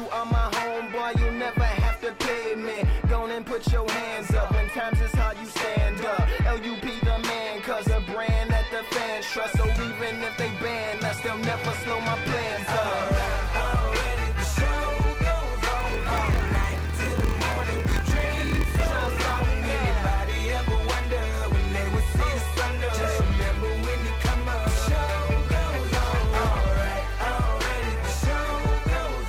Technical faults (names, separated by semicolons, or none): block size mismatch (padded)